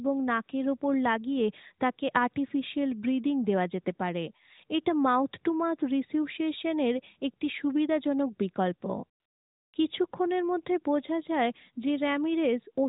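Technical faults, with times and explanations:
9.20–9.74 s, AMR comfort noise: speech frames stop for 540 ms and smooth, steady synthetic hiss replaces the real background, unlike a dropout's silence.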